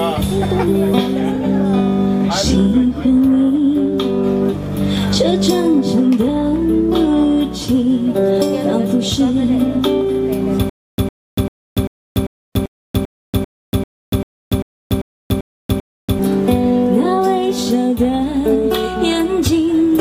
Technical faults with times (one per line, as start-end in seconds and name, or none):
10.69-16.19 stutter with silent gaps